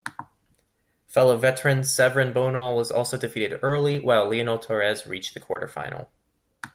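Around 2.55 to 2.63 s, just before "was also defeated", there's a burst of packet loss. Several packets in a row didn't arrive in time, so the receiver carried the last bit of speech forward for about 60 ms, fading it down as the gap went on. When the audio picks back up, roughly 60 ms of real speech is simply gone, so the line jumps forward slightly.

Then there are two short concealed packet losses, one at 3.67 to 3.71 s right after "was also defeated" and another at 5.53 to 5.57 s right after "reached the". Each time, about 20 ms never reached the decoder, and the receiver patched the hole by extending the preceding sound before blending back in. You hear it as a quick smear or wobble, and a brief consonant can get swallowed.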